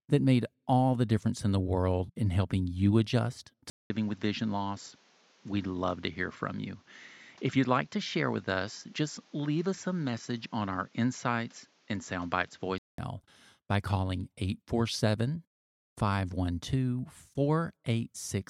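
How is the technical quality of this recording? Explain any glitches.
One glitch stands out. From 3.70 to 12.98 s the speech turns dull and a few decibels quieter, with nothing above 7.6 kHz and a faint new background noise, after a 200 ms gap at the switch. The likely cause is the input switched to a poorer device, a narrower-band microphone with its own tone and noise floor, before the original input returns.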